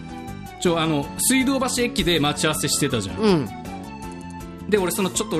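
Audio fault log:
Throughout, MP2 compression. The sound is dull, with gurgling, granular distortion and flickering upper bands. Likely coarse sub-band quantisation, which fits a rate near 80 kbps.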